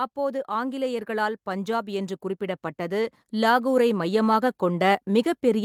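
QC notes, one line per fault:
0.14–5.65 s, automatic gain rising: the automatic gain control judged the incoming level too low and kept stepping its gain upward from 0.14 s right to the end of the clip, rather than settling at a fixed setting. Because the gain is applied to everything the microphone picks up, the speech and the room background swell together in a slow, steady climb, so loudness drifts upward across the whole passage instead of holding level.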